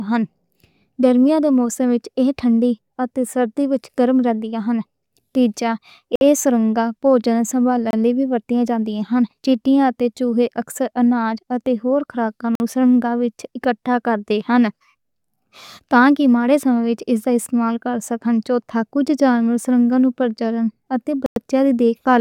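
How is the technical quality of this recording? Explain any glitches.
The speech is interrupted by four short silent gaps and one brief burst of ticking.

Bluetooth stall: the sound drops to silence at 6.16 s for 56 ms (just before "ایہ سرنگاں"), at 7.91 s for 25 ms, at 12.55 s for 48 ms (just before "نوں سرنگ وچ اکٹھا") and at 21.26 s for 101 ms. Each gap is clean silence, and the speech resumes where it stopped or slightly later. The likely cause is interference delaying wireless packets until the headphones' buffer ran empty.

CD scratch ticks: four tiny ticks, the longest about a millisecond, fall between 19.72 s and 20.36 s, which fits one tick per disc rotation. The player could not rebuild the damaged samples from a scratch, so it patched or muted them. These are sharp, regular clicks, unlike the silent gaps of the stalls.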